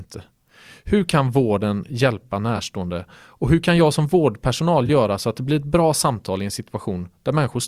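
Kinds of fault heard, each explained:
Corrupt frame concealed: two brief concealed frames in the speech, at 2.56 s (about 38 ms) and 4.86 s (about 30 ms). Each fits a single damaged AAC frame that the decoder detected and papered over rather than played as garbage.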